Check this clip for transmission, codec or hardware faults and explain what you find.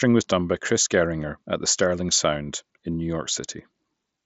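Two brief glitches break the speech, both concealed Bluetooth headset packet loss. At 1.22 s and again from 2.92 to 2.94 s, the sound turns buzzy and repetitive for a moment, then warbles slightly as normal audio resumes. Packets between headset and phone were dropped, and the receiver covered each gap by repeating the closest-matching recent stretch of waveform. The gaps, about 15 ms and 22.5 ms, fit two and three lost frames. The mSBC wideband link underneath passes speech up to 8 kHz with light graininess.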